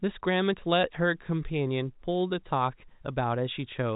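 Nothing goes wrong anywhere in this speech, which just carries the usual narrow telephone sound of G.711 coding, with the top of the band rolling off around 3.8 kHz.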